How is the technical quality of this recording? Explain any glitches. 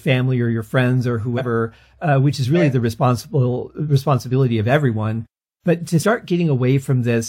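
The recording has two brief dropouts where compressed frames are skipped, at 1.37–1.42 s and 6.02–6.05 s. At each point the speech jumps forward by roughly a tenth of a second, about two frames, which fits a frame length of 46.4 ms. Those frames were either missing from the file or rejected by the decoder as damaged.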